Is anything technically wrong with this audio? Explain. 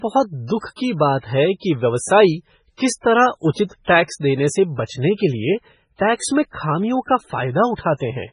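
Yes. Throughout the speech there is heavy damage, likely from MP3 compression. The encoder cut everything above 10.5 kHz, so the treble sounds dull. Weak frequency lines switch on and off between frames, giving a watery, swirly texture and chirpy s sounds. This level of damage fits a bitrate near 16 kbps.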